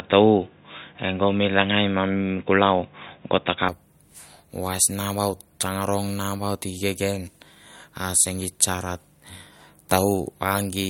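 From the start to 3.69 s, the speech sounds dull and boxy. Nothing reaches above 3.8 kHz, so the top end is simply missing. This matches an input switched to a poorer device, likely a lower-grade microphone or a headset call profile. That path carries its own faint background noise, far below the speech. At 3.69 s the sound clears abruptly, with no gap. The level shifts by a few decibels as the fuller input takes over.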